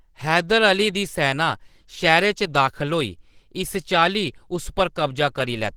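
Throughout the speech, the sound is rough, grainy and hoarse, and the damage is plainly audible from start to finish. The top end is not cut away; content reaches about 20.2 kHz. The likely cause is Opus compression at a low rate, around 16 kbps, in its hybrid speech mode. That mode codes the low band as speech and fills the upper bands coarsely, which gives the grainy, hoarse texture.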